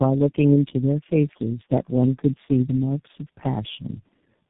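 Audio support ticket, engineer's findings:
Tandem speech coding, whole clip. Rough, muffled, warbly, nothing above 3.8 kHz. Sounds like three low-rate speech codecs back to back, likely G.729A, G.729A, then G.723.1, each re-coding the last one's degraded output, so the damage stacks.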